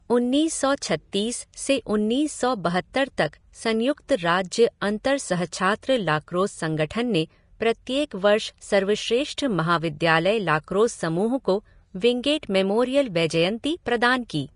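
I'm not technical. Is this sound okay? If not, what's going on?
No. The recording was most likely squeezed hard by Vorbis compression, a method that shrinks audio files by keeping only a rough outline of the high, fine detail. Here it cut away everything above about 10.6 kHz and described the remaining treble so coarsely that its detail turned into hiss. From start to finish the speech sounds grainy and plainly fizzy, voice tones have a rough edge, and sharp consonants come across blurred rather than crisp.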